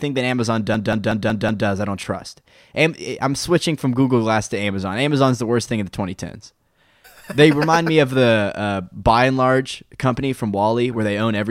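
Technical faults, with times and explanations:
0.74–1.67 s: system hang loop. The system froze and one 186 ms buffer repeated five times, which fits an 8192-sample buffer. This gives a stutter at 5.4 Hz.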